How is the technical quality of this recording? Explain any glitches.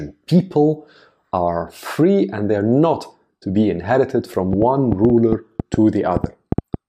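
The recording has one audible fault. A train of clicks runs from 4.53 to 6.75 s: about fifteen similar pulses at an irregular pace, averaging 5.4 per second. They are likely from electrical interference or a faulty connection or power supply, and they pop roughly 15 dB above the speech, sounding through pauses too.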